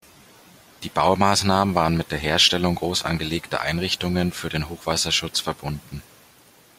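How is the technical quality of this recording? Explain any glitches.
No glitches can be heard anywhere in the recording, and the signal stays steady with nothing in it that needs explaining.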